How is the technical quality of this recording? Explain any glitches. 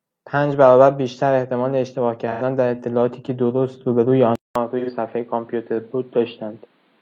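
The recording has two kinds of glitches: two brief concealed dropouts and a lasting change in tone partway through.

At 2.31 to 2.42 s and again at 4.79 to 4.90 s, the speech turns smeared and noisy for about 85 ms. That is AAC frame loss with concealment. The decoder rebuilt the missing stretch from the last good spectrum, which fits two lost frames each time.

At 4.35 s, a 200 ms silence is followed by duller, boxier speech to the end. Nothing remains above 4.7 kHz, the level drops by about 5 dB, and a noise floor appears roughly 35 dB down. The likely cause is that the input switched to a poorer device.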